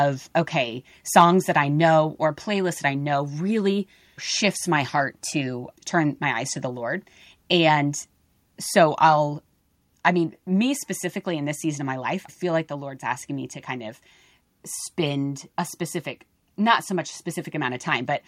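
Right around 1.17 to 1.23 s, just before "that I know or", the loudest peaks get their tops sheared flat. That's microphone overload, most likely from the input gain being set too hot so the peaks run into the converter's ceiling, about 2 dB past it. Only a couple of percent of the samples in that stretch actually clip, but you hear it as a short, harsh crackle riding on the syllable.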